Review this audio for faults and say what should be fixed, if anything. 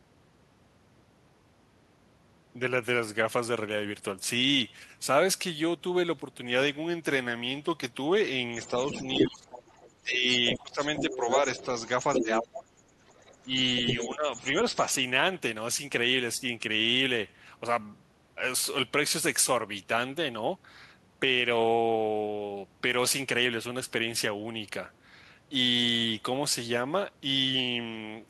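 Speech suppressed in double talk occurs at 8.59–9.66 s, 9.99–12.73 s and 13.53–14.87 s. The talker's level dips by up to about 20, 15 and 10 dB respectively, likely because the echo canceller could not separate near-end speech from loudspeaker echo and attenuated both. Fix this with a double-talk detector that freezes adaptation and eases suppression when both sides are active.

Other side's voice leaking through is audible at 8.62–9.92 s, 10.3–12.48 s, 13.09–13.48 s and 13.87–14.94 s. The second voice sits about 10, 5, 30 and 5 dB below the speech, likely residual echo the canceller failed to remove from the microphone path. Fix this by improving echo-path modelling and residual echo suppression, and by lowering loudspeaker level or increasing mic–speaker separation.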